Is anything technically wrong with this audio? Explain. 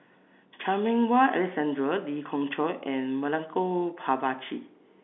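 No, the speech carries the narrow telephone band of G.711 coding, roughly 250 Hz to 3.5 kHz with nothing above about 3.8 kHz, which fits a standard 64 kbps mu-law line, and no technical fault can be heard in it.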